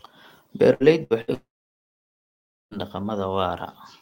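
At 0.73, 1.03 and 1.21 s there's a burst of packet loss each time, roughly a tenth of a second long. The receiver stretches the last bit of speech into a fading buzz or hiss, and when it picks up again about 60 ms of speech is gone. Then from 1.34 to 2.74 s things fall apart, most likely a long network dropout. A short concealment tail fades into about 1.26 s of silence, and the speech comes back with roughly 1.4 s missing.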